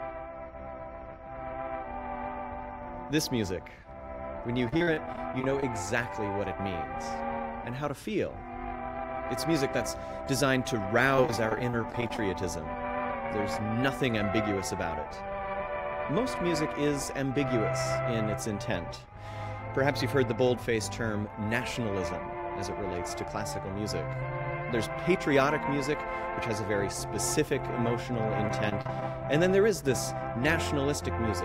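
Repeated packet loss (robotic sound) hits three times: 4.68 to 5.63 s, 11.16 to 12.19 s, and briefly at 28.48 to 29.02 s. The audio keeps dropping short chunks, none longer than about 40 ms, and each hole is papered over by stretching the last bit of sound. That patching covers roughly a sixth to a quarter of each stretch, so you get a choppy stutter with bits missing.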